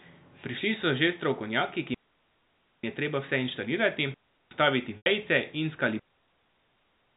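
At 1.94 to 2.83 s, 4.14 to 4.51 s, and from 5.99 s to the end, digital wireless dropouts mute the speech for 0.89 s, 0.37 s and 1.18 s. The receiver lost too much data and cut to near silence with a very fast fade, leaving clean holes with no noise bursts on either side. At 4.97 to 5.06 s, packet loss with pitch repetition covers a 90 ms gap, consistent with roughly nine 10 ms packets. The receiver repeated the last pitch period, giving a brief held, buzzy tone that fades to silence over about 50 ms before the speech cross-fades back in.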